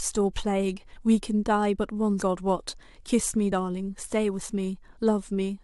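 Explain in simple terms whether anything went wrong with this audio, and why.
Compressed frames were skipped at 0.95, 2.21 and 3.51 s. The speech jumps ahead by roughly 70, 150 and 50 ms. Whole blocks of about 23 ms each were missing or rejected by the decoder.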